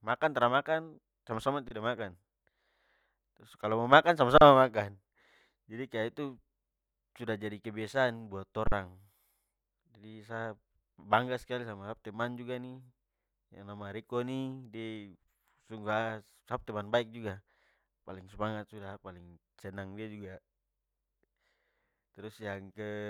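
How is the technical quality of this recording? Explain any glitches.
The speech is marred by three brief dropouts, each an underrun with a held sample. At 1.68 to 1.71 s, 4.38 to 4.41 s and 8.67 to 8.72 s the sound freezes flat for about 23, 35 and 46 ms, then resumes softly, seemingly without losing material. The output buffer ran dry and the converter held its last value until data arrived. The first and third lengths fit gaps of 1024 and 2048 samples.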